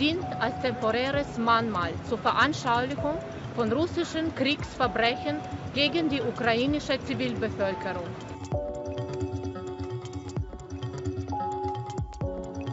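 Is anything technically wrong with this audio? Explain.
No, nothing is technically wrong with this audio.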